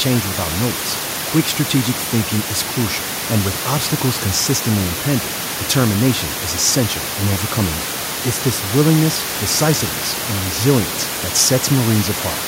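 Speech recording with no technical faults; the room's background noise sits about 9 dB below the voice and belongs to the recording, not the system.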